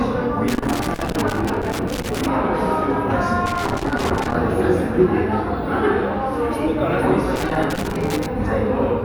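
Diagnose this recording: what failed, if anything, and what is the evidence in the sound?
The analogue wiring is at fault here: there's loose connector crackle in three bursts, at 0.48 to 2.28 s, 3.46 to 4.35 s and 7.36 to 8.26 s. A worn or dirty contact keeps making and breaking as it shifts, chopping the signal into that irregular scratchy crackle, with pops wherever DC sits on the line.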